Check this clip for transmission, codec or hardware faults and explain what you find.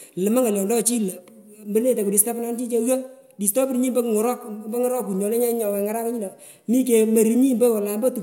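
Nothing in the speech points to a fault anywhere along the chain. There is no event to report.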